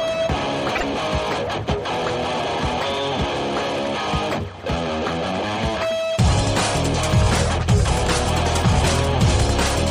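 A likely broken MP3 bit reservoir near 0.75 s: after a stretch of the stream was lost, the following frames looked back for data they had borrowed from earlier frames and decoded unrelated bytes instead. From 0.75 to 0.83 s the sound jumps ahead and breaks up briefly for about 80 ms, a span that fits roughly three frames of 26 ms each before clean decoding returns.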